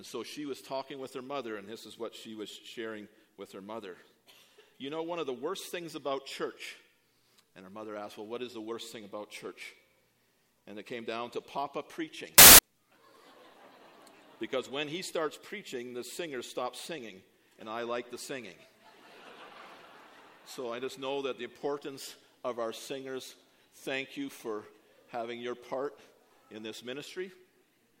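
From 12.38 to 12.59 s the audio collapses into loud, harsh broadband noise: samples built from the wrong bytes. The reader assembles each sample misaligned or byte-swapped, so the rapidly changing low bits dominate. Unlike a clipping or interference burst, it is loud broadband noise.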